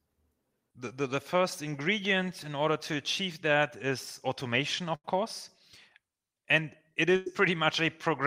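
At 4.95 to 5.05 s, just after "achieve that is automation", a burst of packet loss replaces about 90 ms of speech with roughly 85 ms of the preceding sound stretched out and fading. A second burst at 7.16 to 7.27 s covers about 100 ms in the same way. Unlike a plain dropout, neither gap falls silent. The concealed stretch sounds like a held, decaying buzz or hiss, and the speech then resumes further along with that portion missing.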